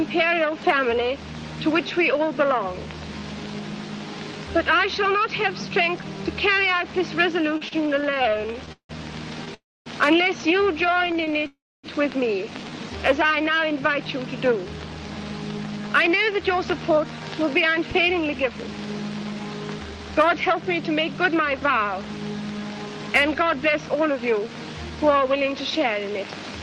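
Repeated stalls (stutter) run from 7.57 to 9.48 s: packets kept arriving late, so the jitter buffer emptied 22 times and the receiver stretched the last sound to bridge each gap, adding 448 ms in all, the longest hold 169 ms. The audio drags and stumbles without losing anything.

A call audio freeze follows at 9.54 to 9.88 s. The sound holds briefly, then drops to silence for about a quarter of a second, a 314 ms pause before the audio resumes where it stopped, likely from packets held up in transit.

Repeated stalls (stutter) return at 10.92 to 11.46 s, this time nine short gaps of at most 19 ms, 95 ms filled, giving a fine, jittery catch.

A second call audio freeze runs straight on from 11.46 to 11.86 s, 371 ms long, with about 270 ms of silence before the sound picks up again.

A jitter buffer speed-up spans 14.44 to 24.91 s. With too much audio queued after the delays, the receiver trimmed many pitch-period-sized slices to shrink the backlog, removing roughly seven-tenths of a second. 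The audio plays about 7% fast at unchanged pitch and sounds slightly hurried.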